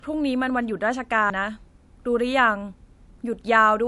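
Throughout, the speech was likely MP3-encoded at a low bitrate and then saved again at a high one, so nothing above 11.3 kHz returns and the dull, smeared first-pass artefacts remain. At 1.30 s, a CD skip jumps the laser to another turn of the spiral, giving a tick, a very brief mute, and an abrupt jump in the sound.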